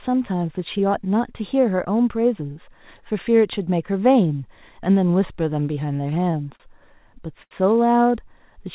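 From 5.86 to 6.62 s and again from 7.08 to 7.53 s, repeated stalls (stutter) occur: late packets emptied the jitter buffer, so the last sound was held through seven brief gaps, then four longer ones up to 82 ms. Unlike loss dropouts, nothing is missing; the speech drags rather than skips.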